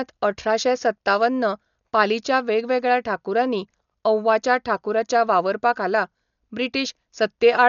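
Throughout, likely starved Dolby Digital compression, fitting about 48 kbps, passes nothing above 6.9 kHz, so the speech sounds dull, rough and fluttery.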